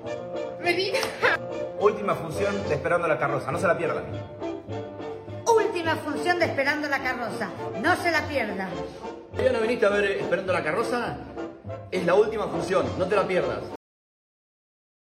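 The final buffers of the recording were never written out, leaving a cut-off end: at 13.76 s the audio stops abruptly in the middle of a sound rather than finishing it. There is no fade or natural decay; the signal simply drops to digital silence, and that dead silence fills the last 1.4 s or so of the clip. The abrupt truncation makes the sound feel chopped off, as though playback or capture was halted before it could complete.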